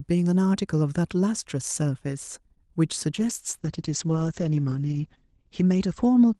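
Speech carried over an Opus call link, and at 3.17 s you hear a call bitrate drop that lasts to the end: the bandwidth estimate falls, so the encoder gets squeezed and codes far more coarsely. The top end shrinks from about 12 kHz to 8 kHz, giving a muffled, watery sound, roughest for nearly two seconds. That fits a fall from around 48 kbps to roughly 10 kbps, and it does not fully recover before the clip ends.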